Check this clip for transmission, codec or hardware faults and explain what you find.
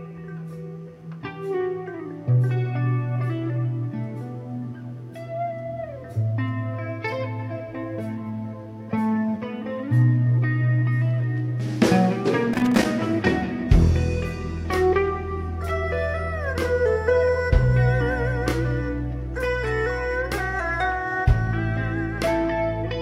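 One hardware fault: from 12.53 to 12.85 s an irregular burst of scratchy crackle cuts in, loose connector crackle, where a worn contact repeatedly breaks and remakes, chopping the signal.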